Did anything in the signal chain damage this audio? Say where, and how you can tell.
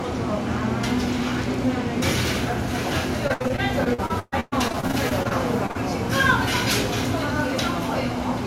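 Yes, there is repeated packet loss (robotic sound) from 3.27 to 5.77 s. This is network damage. Over that stretch the audio breaks into roughly twenty short holes, the longest about 126 ms. About 0.7 s is patched by stretching the last good sound and another 0.7 s simply drops out, so around 29% of the span is concealed. The repeated fills give the choppy, robotic texture, as late or lost packets keep forcing the receiver to improvise.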